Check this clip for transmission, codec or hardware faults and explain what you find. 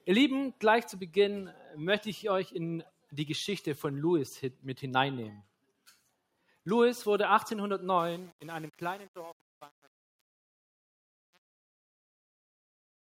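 Three faults are audible: a speech-style noise suppressor working on non-speech material throughout, one sound it cuts harder than the rest, and truncation distortion on the closing fade.

Noise suppressor applied to music or sounds, throughout the clip. A suppressor built for speech treats steady, sustained content, ambience and reverb as noise and keeps pulling gain down on it, with a swing of roughly 5 dB. Onsets pass while held material and tails sink, so the level pumps and flutters and the sound thins out instead of sitting steadily.

Sound cut by the noise suppressor, 1.51 to 1.77 s. Here the suppressor misjudged this particular sound as noise and turned it down more than its surroundings. The drop reaches about 8 dB at its deepest, over about a third of a second.

Truncation distortion on a fade, 7.99 to 13.11 s. The fade-out, which starts around 8 s and ends at 13.1 s, passes through a gain stage that keeps too few bits and adds no dither. 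The resolution sounds like about 7 bits. As the level falls toward the smallest step, the waveform collapses into a few coarse square steps. The tail turns gritty.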